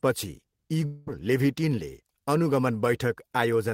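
From 0.85 to 1.09 s the speech smears into a fading buzzy hiss lasting about 0.22 s, then resumes with roughly 0.2 s of the sound skipped. This is likely a long network dropout, with the receiver stretching the last audio to cover the gap.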